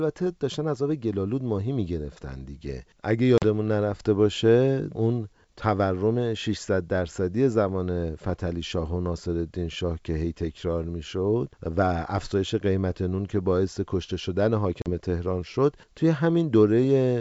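At 3.38 and again at 14.82 s, packet loss on an ADPCM call leaves a hard-edged 40 ms hole, a couple of packets, shown as a flat gap in the waveform and a blank vertical stripe on the spectrogram. The resumed speech then sounds briefly distorted because the decoder's predictor and step size have drifted from the sender's, and it settles within tens of milliseconds.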